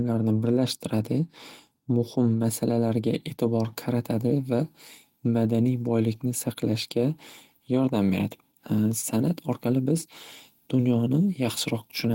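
No technical faults detected.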